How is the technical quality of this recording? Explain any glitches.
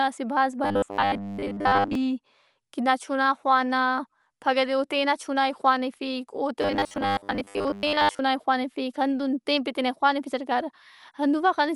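The technical quality is poor. Heavy lossy coding runs through the whole speech clip, and two stretches break into a mechanical buzz.

Dolby Digital compression, throughout: the dull, band-limited sound is likely from AC-3 style coding at a low bitrate, which fits roughly 64 kbps. The encoder cuts the band and starves many frequency lines of mantissa bits. The decoder fills those lines with dither noise, so the damage is plainly audible as muffled speech with a rough, fluttering grain around tonal parts.

Robotic sound from repeated short buffers, from 0.64 to 1.95 s and again from 6.62 to 8.2 s: here the speech turns into a rigid, metallic buzz at 100 Hz that still loosely tracks the speech. This is likely because new audio arrived too seldom, so the playback repeated the last short chunk to fill the gap. A 100 Hz buzz points to a chunk about 10 ms long, and most of the real audio in those stretches is lost.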